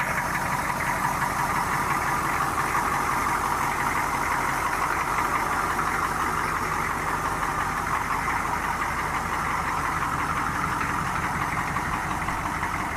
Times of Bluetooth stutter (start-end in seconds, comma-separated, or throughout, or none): none